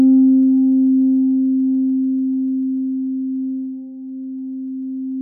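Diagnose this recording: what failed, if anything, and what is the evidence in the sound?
The failure is in clocking between converters: two devices are likely running on separate, unsynchronised clocks, with a mismatch of roughly 150 ppm. Each time the drift adds up to a full sample, one sample is dropped or repeated, and that discontinuity is heard as a tick. These clock slip clicks repeat steadily about every 0.15 s from 0.14 s to 5.12 s, some forty in all, forming a faint regular ticking laid over the sound.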